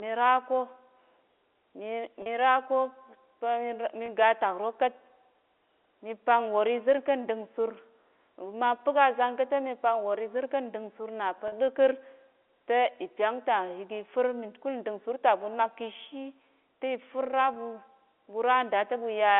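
Packet loss with pitch repetition occurs four times: at 2.22–2.26 s, 4.06–4.08 s, 11.48–11.52 s, and 17.54–17.56 s, just after "kishi ti fir". The receiver lost 40 ms, 20 ms, 40 ms and 20 ms of audio, consistent with one or two dropped packets each time. It looped the last pitch period to fill each gap, so each dropout sounds like a briefly held, slightly buzzy tone before normal speech resumes over the narrow telephone band.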